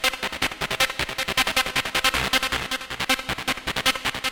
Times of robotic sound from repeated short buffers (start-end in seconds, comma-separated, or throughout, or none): none